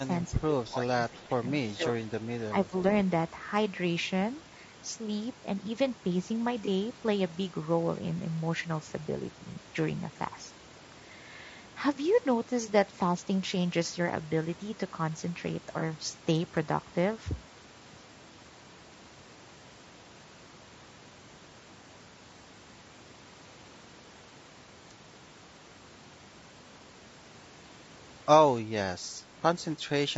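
Throughout the speech there is plainly audible roughness and graininess, with noise filling the gaps between harmonics. This is consistent with low-delay AAC compression at 32 kbps, likely AAC-ELD, whose short frames resolve pitch structure poorly. The band stops at 8 kHz, as the call's microphone processing sets it.

Between 0.32 and 0.55 s, 0.73 and 1.48 s, 1.7 and 1.99 s, and 2.51 and 2.73 s, the speech level dips by about 10 to 15 dB in short stretches. This is likely speech suppressed in double talk, where an echo canceller mistook overlapping far-end activity for echo and turned the talker down.

At 6.65, 9.53 and 15.79 s there are brief smeared, noisy patches, each about 20 ms long, matching a single lost frame. This is AAC frame loss with concealment: the decoder rebuilt each missing frame from the previous spectrum, which blurs the detail at that instant.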